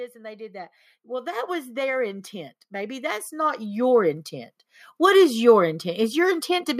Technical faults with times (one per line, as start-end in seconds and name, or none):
0.13-4.26 automatic gain rising